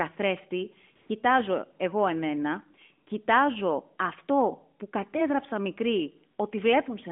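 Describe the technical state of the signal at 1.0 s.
At 1.0 s the real background drops out and a smooth, steady hiss takes its place from 0.955 to 1.10 s, about 140 ms. This is AMR comfort noise: the phone judged the moment silent, stopped sending speech frames, and the receiver filled the gap with synthetic noise.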